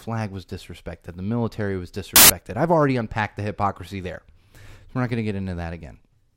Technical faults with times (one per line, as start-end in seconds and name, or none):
2.16-2.30 samples built from the wrong bytes